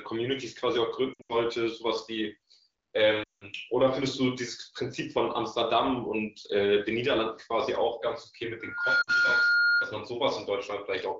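At 1.14 to 1.35 s there are lost AMR speech frames. Radio errors corrupted the frames, and the decoder had to guess. It repeated the last good pitch and vocal tract settings at falling gain. Here the losses are scattered. The longest gap is about 80 ms, so the speech warbles and drops out in short bursts. At 3.23 to 3.45 s a loss of about 180 ms follows. The sound smears, then fades out quickly, as wideband concealment does. It returns rough for a moment.

From 8.6 to 10.04 s a loudspeaker feedback squeal appears. A microphone is picking up the speaker it feeds. At 1.4 kHz the loop gain passes one. That single tone swells over about a third of a second. It settles around 5 dB above the speech. It holds as a steady whistle until 10.04 s. Inside it, at 9.02 to 9.10 s, another brief burst of lost AMR speech frames makes the speech dip under the tone. That gap is about 60 ms. The wideband AMR coding itself sounds clear, which fits a rate around 16 kbit/s.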